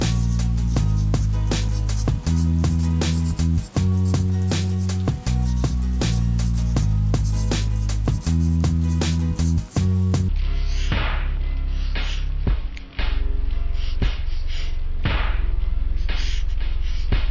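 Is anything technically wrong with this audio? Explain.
Yes. From 10.29 s to the end, the sound abruptly drags and sinks, running at 0.363 times normal speed and about 17.6 semitones lower. This is a wrong sample rate: the samples play unconverted at a slower rate, consistent with 44.1 kHz material played at 16 kHz.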